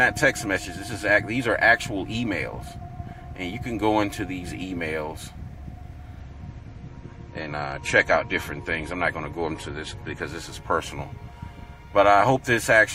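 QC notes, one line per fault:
6.20–10.20 s, adaptive stream at a lower bitrate: for four seconds the treble vanishes above about 14.8 kHz and the top end turns swirly and metallic, then full quality returns just as abruptly. The stream appears to have stepped down from roughly 128 kbit/s MP3 to something near 40 kbit/s while the connection lagged. Unlike a dropout there is no gap or stall, and unlike a plain low-pass filter the switch brings coding artefacts with it.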